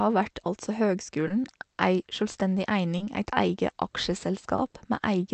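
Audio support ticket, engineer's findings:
Clock drift between sender and receiver, whole clip: sender clock running roughly 1% slow, so the jitter buffer keeps draining and the receiver repeats small slices to keep up. Heard as small, unevenly spaced timing hiccups throughout.

Short stall from a late packet, 1.28 s (after "av vert altså"), 2.98 s (before "eit eige"), 4.56 s. Each time the packet arrived late, the buffer ran empty, and the last sound was held for about 20 ms before resuming at the same point. Nothing is missing, just a brief held sound. Delay rises about 20 ms per stall. Sits on a call-codec path whose band stops near 8 kHz.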